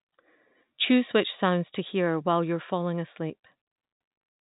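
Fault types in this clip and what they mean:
No faults are present: the speech sits in an ordinary G.711 telephone channel, with nothing above about 3.8 kHz and at most a faint, level-following quantisation noise of the kind mu-law coding leaves.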